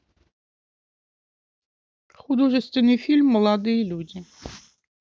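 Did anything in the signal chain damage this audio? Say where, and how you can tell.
No, nothing audible in the recording points to damage at any stage of the chain.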